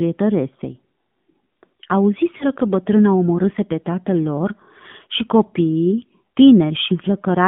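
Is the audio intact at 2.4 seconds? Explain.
No. There is a lost AMR speech frame from 2.38 to 2.45 s, just before "că bătrâna omorâse pe". A radio error corrupted the frame, so the decoder filled the gap by reusing the last good pitch and vocal tract settings at lower gain. The result is a brief dip or warble. Its length fits a single lost 20 ms frame, and the voice comes back weak or rough for a moment.

This moment also carries the AMR narrowband mobile codec that runs through the whole clip. The speech is confined to roughly 150 Hz to 3.5 kHz. It has a plainly buzzy, synthetic quality, which points to a low rate around 7.4 kbps. The codec rebuilds the voice from a vocal tract model driven by sparse pulses, and at so few bits the detail is lost.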